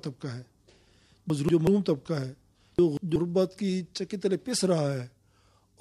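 Twice a block of audio about 0.19 s long reached the output one block late and played after its successor, so chunks are out of order from 1.30 to 1.67 s and 2.79 to 3.16 s. Each spot sounds jumbled, with three hard joins.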